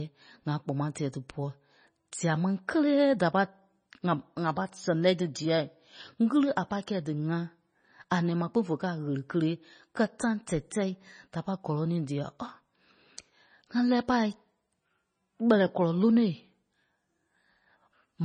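MP3 compression damage runs through the whole recording, from start to finish. The speech has nothing above 9.4 kHz, and the damage is heavy, most likely from an MP3 encoder short of bits, which fits a bitrate around 24 kbps. With too few bits, the encoder cuts the treble at a fixed frequency and drops weaker frequency lines frame by frame. That leaves the sound dull, watery and swirling, with s sounds turning metallic and chirpy and consonant attacks smeared.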